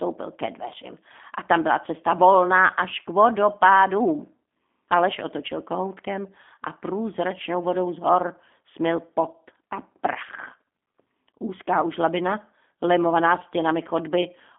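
Throughout, G.729 codec damage: speech rebuilt from a filter and sparse pulses sounds rough and synthetic, and the spectrogram holds only 250 Hz to 3.5 kHz.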